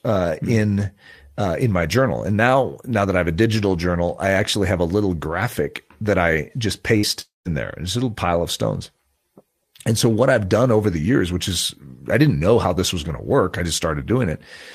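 Just after "graphic that I just", a burst of packet loss runs from 6.97 to 7.06 s. About 60 ms of audio is skipped. The last sound is stretched out and fades, which a spectrogram shows as smeared, flat bands that dim before normal sound resumes.

From 7.21 to 7.48 s comes what is likely a long network dropout, losing about 240 ms. The final sound is carried on and fades, and then goes to roughly 160 ms of silence, a flat, near-empty stretch in the waveform, before the audio returns further along.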